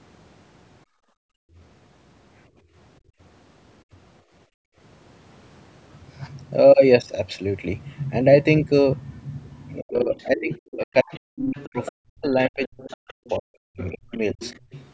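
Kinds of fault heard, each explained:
Background gated by the echo canceller: Around 0.85 to 1.57, 2.54 to 3.19 and 4.46 to 4.77 s, the microphone is pulled down hard while the loudspeaker plays. The room sound drops by about 33, 21 and 35 dB, showing as near-empty gaps in the spectrogram's noise floor and flat stretches in the waveform.
Speech suppressed in double talk: From 9.8 to 14.41 s the talker's speech dips and breaks up in pieces, about 3 s in total, at worst roughly 40 dB down. This is likely the canceller attenuating both voices at once, and it appears as chopped, hollowed-out energy bands and notched waveform envelopes.
Other side's voice leaking through: A second, fainter voice sounds at 10.14 to 10.59, 11.12 to 11.92 and 12.64 to 14.85 s, roughly 15 to 25 dB below the talker. It is likely loudspeaker echo the canceller missed, showing as weak, overlapping harmonic traces in the spectrogram beneath the main speech.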